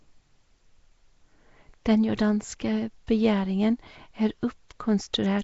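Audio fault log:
throughout, Nellymoser compression: speech likely passed through the Nellymoser Asao codec, which starves weak bands of bits and fills them with noise, leaving a plainly audible hissy halo and smeared underwater tone, nothing above 7.7 kHz, fitting roughly 32 kbps.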